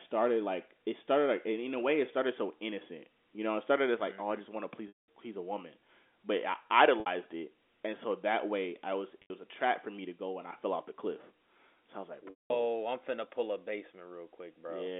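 Packet loss with pitch repetition hits at 4.88–5.08 s after "just want to please", then 7.00–7.06 s, 9.22–9.30 s and 12.30–12.50 s. The last pitch period gets looped over each gap: brief buzzy holds for the short ones, fades to silence for the 200 ms ones.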